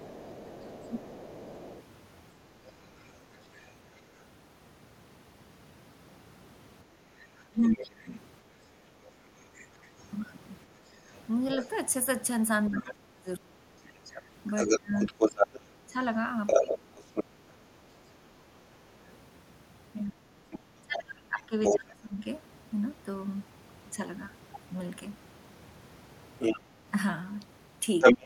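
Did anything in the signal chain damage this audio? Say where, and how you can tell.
Yes. The echo canceller in the call processing likely left part of the loudspeaker signal in the microphone feed, so the other side's voice leaks through. It is faint from 0.0 to 4.25 s, then near or above the talker's level at 7.21–17.24 s, 20.08–21.75 s and 26.39–28.25 s.

The same canceller also causes speech suppressed in double talk: when both sides talk at once, it likely mistakes the talker for echo and turns everything down. The voice dips by up to about 30 dB at 0.89–1.31 s and 7.5–8.58 s, in pieces across 11.55–22.26 s, and briefly at 28.2 s.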